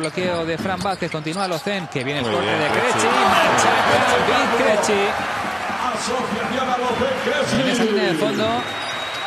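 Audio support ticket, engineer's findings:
Overlapping chunks at 2.50–2.52 s, 5.02–5.05 s and 7.55–7.57 s: a 25 ms stutter at each join, every 2.5 s. The chunking stage starts each block before the last ends, so the overlapping 25 ms plays twice.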